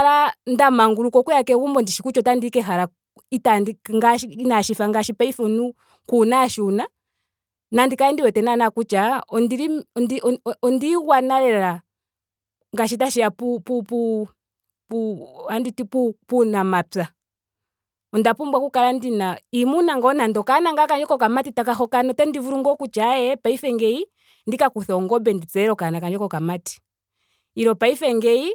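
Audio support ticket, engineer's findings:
No faults found in recording.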